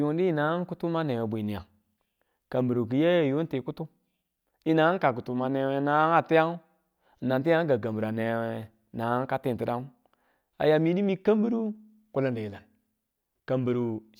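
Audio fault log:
No faults can be heard anywhere in this speech recording. There is nothing to log at any time in the clip.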